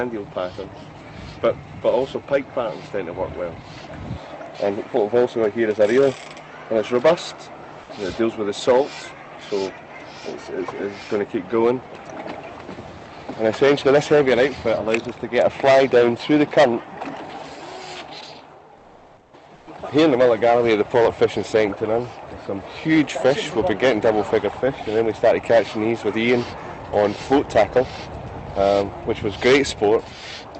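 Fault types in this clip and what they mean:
Comfort noise in place of the background: pauses were likely left untransmitted (Opus DTX) and filled with synthetic noise for 560 ms near 18.8 s, about 3 dB louder, and 120 ms near 19.6 s, about 9 dB quieter. On a spectrogram this shows as smooth, featureless noise, and on the waveform as a flat, even envelope.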